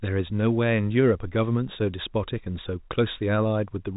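Nothing stood out on listening to this speech clip, which carries the narrow 4 kHz band of G.711 telephone coding as expected.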